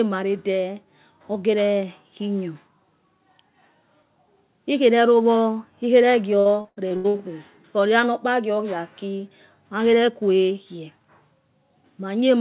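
From 6.4 to 7.21 s the speech breaks into repeated packet loss, giving a robotic sound. Seven holes fall in under a second, the longest about 79 ms. Each hole is patched by stretching the last bit of sound, so roughly 40 percent of that span is filler. The result is choppy, with pieces missing. Through the telephone-band call path, everything above 4 kHz is cut.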